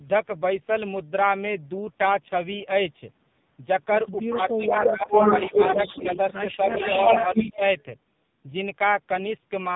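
Speech, heard through the AMR narrowband mobile codec for its full length. Nothing passes above 3.8 kHz. The damage is heavy. The voice sounds buzzy and synthetic, as the vocal-tract model struggles on very few pulses per frame. That points to a low AMR-NB mode, around 5.9 kbps. The low bass is trimmed by the call's microphone processing, as expected. Two call faults overlap in the middle of the clip. The first is an echo leak. A delayed copy of the voice returns from 4.47 to 6.34 s, about 353 ms behind. It returns again from 6.7 to 7.83 s, about 359 ms behind. The copy is about 5 dB louder than the speech at first, and later just as loud. The likely cause is a loudspeaker on the far end whose echo canceller let part of the pickup through. The second is speech suppressed in double talk. The voice dips in pieces at 4.27 to 5.13 s, most deeply there, by roughly 20 dB. Shorter dips come at 5.5 to 6.05 s and 7.32 to 7.61 s, each by around 10 dB. 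A slight one follows at 6.65 to 6.75 s. These dips line up with the echo. That suggests the echo canceller likely mistook the talker for echo and turned both down.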